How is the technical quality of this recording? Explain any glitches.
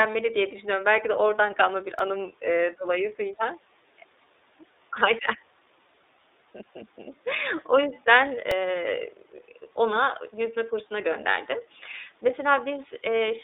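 The recording is clearly degraded: the whole clip passes through a narrowband voice codec, and two tiny stutters interrupt the speech.

The iLBC codec is present throughout. Sound is confined to roughly 300 Hz to 3.7 kHz, with a rough, slightly synthetic texture consistent with about 13 kbps coding of independent 30 ms frames. That frame independence gives a uniform graininess rather than the smeared, pre-echo artefacts of transform codecs.

Repeated buffers occur at 1.99 s, between "de oradan kalma bir" and "anım ııı dolayısıyla", and at 8.51 s. Late audio forced the device to replay its last tiny block, which fits a 64-sample buffer, three and two extra times. Each event sounds like a brief click or buzz rather than a silent dropout.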